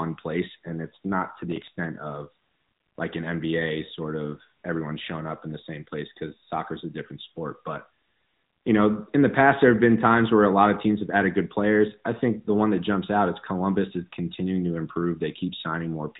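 From start to finish the speech carries the AMR narrowband mobile codec sound. Everything above about 3.8 kHz is simply gone, so sibilants go dull and the whole thing has that phone-call boxiness. The codec rebuilds the voice from a vocal-tract model fed by sparse pulses, and here the damage is plainly audible as a buzzy, synthetic edge, which fits one of AMR-NB's upper modes around 10.2 kbps.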